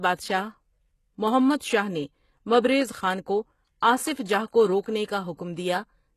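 From the start, the speech has the gritty, metallic treble and lispy s sounds of HE-AAC compression, which is the likely cause. The top band is rebuilt from copied lower bands rather than coded, nothing sounds above about 12.3 kHz, and the damage points to a low bitrate near 16 kbps.

At 4.81 to 4.86 s, just after "جاہ کو", there is pre-echo. A sharp attack falls late in a transform block, so the quantisation noise spreads back about 48 ms into the quiet moment before it. That is heard as a brief hiss ahead of a softened, smeared onset.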